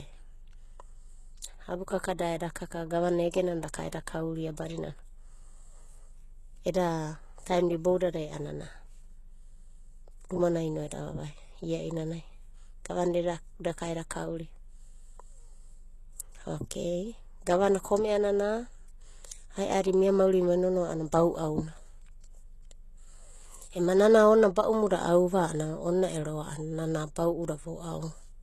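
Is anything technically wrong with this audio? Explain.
Yes. Throughout the speech there is plainly audible damage of the kind HE-AAC compression leaves, likely from encoding at a very low rate around 16 kbps. Nothing reaches above 12.3 kHz, yet the treble doesn't sound dull: it has been rebuilt from copied lower bands rather than coded, so s sounds come out gritty and metallic or lispy. That synthetic brightness, not a simple muffled roll-off, separates it from plain low-pass filtering.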